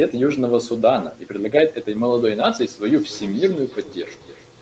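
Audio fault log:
2.86 to 4.62 s, feedback echo between two devices: a second device in the same room is playing back what the first device's microphone sent, and that microphone hears it again. The echo canceller only removes its own device's playback, so this copy passes through. The speech returns at a steady interval of roughly 300 ms, about 20 dB below the direct sound, each pass sounding thinner and more ringing, and the repeats run on to the end of the clip.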